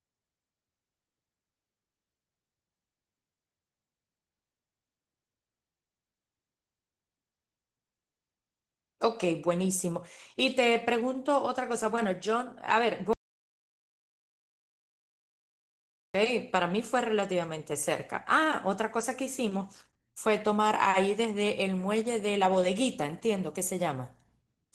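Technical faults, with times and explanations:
Throughout: Opus voice compression. The speech sounds muffled and hoarse, with a faintly robotic edge. The low band is coded by linear prediction and the top by a transform layer, at a rate that fits roughly 16 kbps with 20 ms frames.
13.13 to 16.15 s: audio dropout to silence. The speech cuts out mid-flow into about 3 s of total silence with no room tone, then resumes abruptly. The likely cause is a lost input, with the recorder writing silence until the signal returned.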